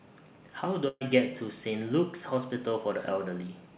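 From 0.88 to 1.03 s, a burst of packet loss removes about 120 ms of speech. The receiver prolongs the last sound for about 126 ms, fading it down, then leaves about 20 ms of silence. On a waveform, this shows as a decaying envelope, followed by a brief gap and an abrupt restart. Like the rest of the clip, it shows nothing above 4 kHz, which fits a G.711 call codec.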